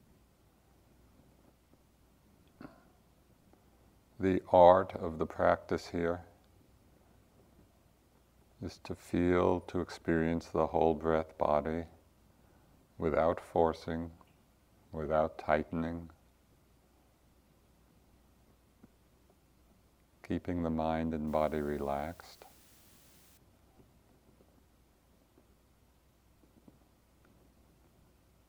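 From 21.28 to 23.37 s, the audio drops to low bit depth with dither. Only about 9 bits carry the signal. Dither randomises the rounding error, so it becomes steady white noise. A constant, even hiss appears, roughly 30 dB below the signal, without distortion.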